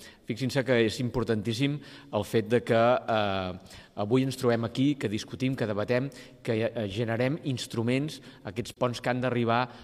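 At 8.72 s the decoder lost an AAC frame and zeroed its spectrum instead of concealing it. This is AAC frame loss with muting. The overlapping windows fade the sound out and back in by 8.77 s, leaving a brief, soft-edged hole that fits a single missing frame of about 43 ms.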